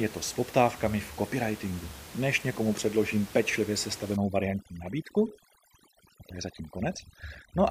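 From 4.16 s to the end of the speech, overdone noise removal sets in. The room noise, about 17 dB below the voice before that point, drops and breaks up into twinkling specks. Bands close to the estimated noise floor are pushed down, so quieter parts of the voice vanish with them. Unlike codec artefacts, the damage tracks the noise level and emerges as the background disappears.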